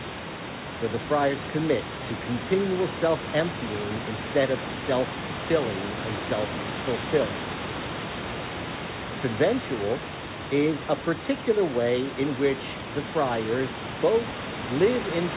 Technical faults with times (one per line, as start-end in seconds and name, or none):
none